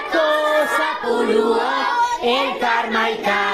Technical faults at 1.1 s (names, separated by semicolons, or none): skip ahead